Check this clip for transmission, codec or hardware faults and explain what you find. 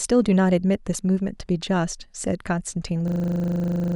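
One fault is present. From 3.08 s to the end, the sound freezes into a rapid, rattling buzz at 25 Hz. This is a system hang loop: the driver stalled while the hardware replayed one 40 ms buffer about 23 times, and roughly a second of audio was lost.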